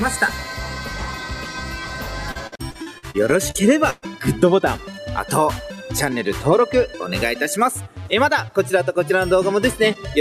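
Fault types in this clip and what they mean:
Repeated packet loss (robotic sound): from 2.31 to 4.05 s, data keeps failing to arrive in time, leaving about ten holes across this stretch, the longest about 117 ms. Each hole is bridged by stretching out the sound just before it, and these patches make up roughly a quarter of the span, about 426 ms, while about 440 ms is simply missing. The rapid alternation of smeared repeats and dropouts gives a choppy texture with pieces missing.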